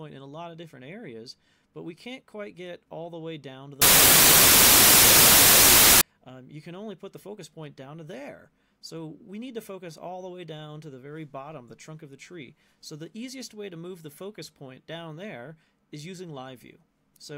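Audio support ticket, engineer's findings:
Samples built from the wrong bytes, 3.82 to 6.01 s: loud, harsh broadband noise swamps the audio. Probably the decoder or reader misaligning sample bytes, so the jittery low bits end up running the show.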